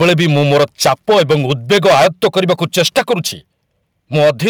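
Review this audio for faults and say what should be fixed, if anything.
From 0.0 to 3.14 s and again from 4.15 to 4.49 s the speech has a harsh, crackling edge on its loudest peaks, most likely microphone overload: input driven about 13 dB, then about 8 dB, past the converter's limit, flattening roughly a tenth of the samples. Unlike codec distortion, the crackle follows signal level, worst on the loudest syllables and absent from quiet passages. Lowering the microphone's input gain or moving further from the capsule would prevent it.

At 0.02 s and at 3.13 s the whole signal, background included, drops about 2 dB in one sudden step, likely the microphone volume being stepped down by the call software reacting to the clipping. A single abrupt step at a clipped peak sets it apart from a smooth automatic gain ride or a fade. Setting the input level correctly beforehand removes the need for these corrections.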